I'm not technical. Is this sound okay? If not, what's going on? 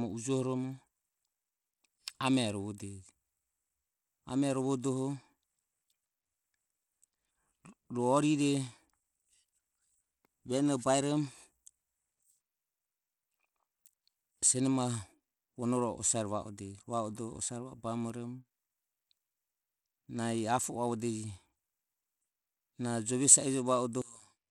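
No. Bluetooth SBC compression damage runs through the whole clip. The speech was likely squeezed by the basic Bluetooth codec, which gives the high frequencies too few bits, so the treble flickers or drops out and a gritty, grainy edge sits on the sound.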